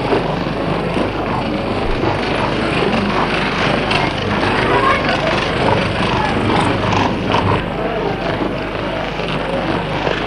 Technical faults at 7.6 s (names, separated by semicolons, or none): channel delay (doubling)